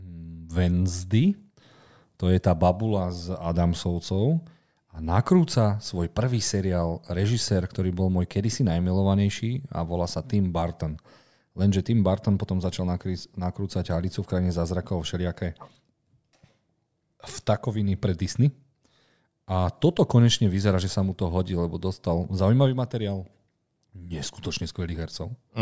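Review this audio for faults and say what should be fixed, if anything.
Nothing stood out on listening to this speech recording, so there is nothing here that needs fixing.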